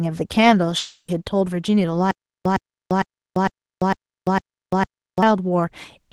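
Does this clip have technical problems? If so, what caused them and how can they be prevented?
Yes. The clip has three faults.

Long network dropout, 0.78 to 1.09 s: the stream was most likely interrupted, so no packets reached the receiver. The receiver extended the last sound as a fading buzz, left a short silence of 70 ms, and then resumed with about 200 ms of speech missing. Prevention: use a more stable connection and forward error correction or redundancy, so brief outages can be covered.

Jitter buffer speed-up, 1.17 to 1.93 s: after the outage the buffer held roughly a tenth of a second more than its target. The receiver trimmed about 70 ms in many tiny pitch-period cuts, so the speech runs at 108% speed with unchanged pitch and sounds hurried. Prevention: reduce network jitter and bunching so the buffer seldom overfills.

Stutter with silent gaps, 2.11 to 5.23 s: the player likely stalled and replayed its last fragment at each retry. 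The same 110 ms burst repeats six times every 454 ms, with 344 ms of digital silence between, and the intervening audio is lost. Prevention: fix the stalling source and make the player output plain silence or concealment instead of looping stale buffers.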